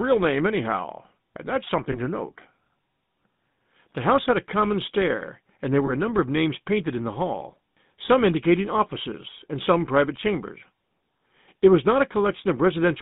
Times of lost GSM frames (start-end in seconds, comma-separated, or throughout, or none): 1.92-1.99, 5.86-5.91